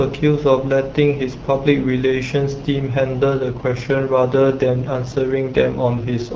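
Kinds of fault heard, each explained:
AMR rate drop: the network switched the AMR-WB codec down from 12.65 to 6.6 kbit/s, likely to free bits for error protection on a weak radio link, so from about 3.39 s to the end the speech turns rough, raspy and synthetic, with no gap and no loss of bandwidth.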